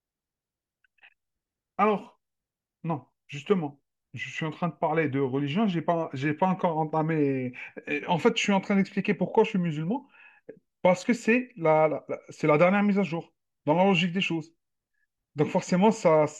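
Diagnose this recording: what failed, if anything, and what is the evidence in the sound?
Nothing failed; no faults heard.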